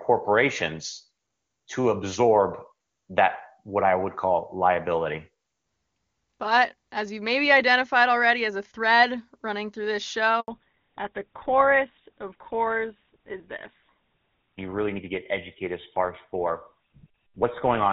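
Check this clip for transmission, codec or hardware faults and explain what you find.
Two faults appear, both at the same moment, right after "thread running through this": a short handover gap and then a lasting fallback to narrowband.

The handover gap runs from 10.40 to 10.48 s, about 80 ms. The call was being passed from one network link to another, and no speech frames got through during the switch. The sound collapses within a few tens of milliseconds and stays silent until the new link carries audio again, so whatever was said in that window is simply missing. Unlike a single dropped packet, which a decoder would usually smooth over with a brief concealed fill, this is a clean hole followed by a change in the link itself.

The fallback to narrowband begins at 10.48 s and lasts to the end of the clip. Before the gap the call has the full, clear wideband character of HD Voice at a high rate, with audible content up past 6 kHz, consistent with AMR-WB at its top rate and no noticeable codec damage. 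After the gap nothing above 4 kHz survives, and the speech turns duller and rougher, which fits a switch to an older narrowband codec such as GSM full rate. What separates it from a filter or equaliser problem is the timing: the bandwidth loss starts exactly where the handover ends and never recovers, along with the added roughness.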